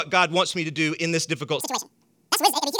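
A short speech clip that's fine until about 1.61 s, right after "do in this difficult", where it suddenly lurches into chipmunk territory through to the end at 2.80 s. That's audio read two samples at a time (double speed): the reader grabs pairs of samples as one frame, so everything plays 2x fast and a full octave (12 semitones) up.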